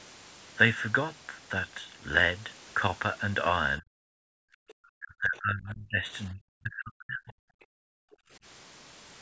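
From 3.79 to 3.96 s the speech sags hard, around 40 dB down, which is likely speech suppressed in double talk: the canceller hears the far end playing and mistakes the talker for echo. At 4.24 to 4.69 s the room sound itself drops about 40 dB, with the background gated by the echo canceller while the loudspeaker plays, then it comes back. The speech dips return at 4.97 to 6.04 s, around 35 dB, and at 6.28 to 7.42 s, around 40 dB, both stretches close to a second long. A last background gate hits 7.70 to 8.31 s.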